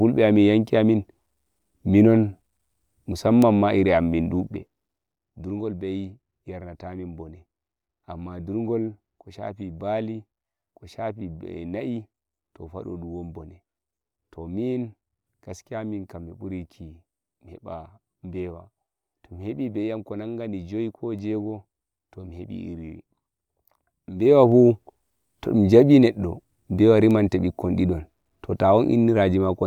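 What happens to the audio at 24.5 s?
Zipper noise runs from 24.15 to 24.52 s. The speech level shifts by about 15 dB in unsmoothed 1 dB jumps, roughly thirty a second. Each jump puts a small click into the signal, so a rapid ticking zip rides on the sound while the level moves.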